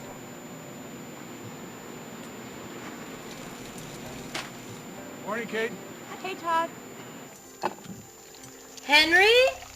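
A switching supply whistle runs through the whole clip: a thin, high tone around 7 kHz, sitting roughly 25 dB below the main sound and wandering between about 7.0 and 7.2 kHz. It comes from a switch-mode power supply whose switching has dropped into the audible range, either by cycling in bursts under light load or by beating against a second converter. As the load on the supply shifts, the switching rate moves, so the whistle's pitch slides within that narrow band.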